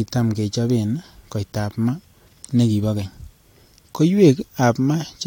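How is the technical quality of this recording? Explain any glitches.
No glitches can be heard anywhere in the recording: the speech signal stays continuous and stable throughout, with no interruptions, level jumps or added noise to explain.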